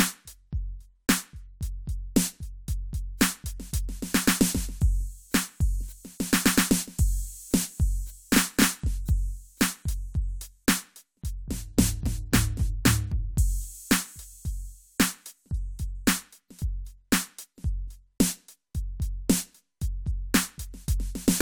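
Nothing technical goes wrong anywhere in this music, so there's no fault to point to at any moment.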